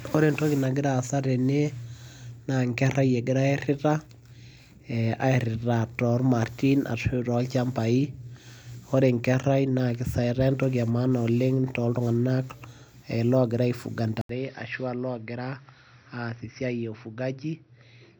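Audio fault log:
14.21–18.20 s, input switched to a poorer device: 80 ms waveform gap, then duller audio about 5 dB quieter; spectrogram empty above 5.8 kHz, faint new noise floor, likely a narrower-band microphone.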